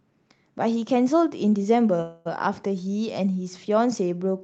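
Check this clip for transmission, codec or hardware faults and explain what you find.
There's one fault worth flagging, on a call path whose Opus coding caps the top end around 8 kHz. From 2.01 to 2.27 s there's a call audio freeze, likely from delayed packets draining the jitter buffer: about 240 ms of fading filler, then the speech resumes with nothing lost.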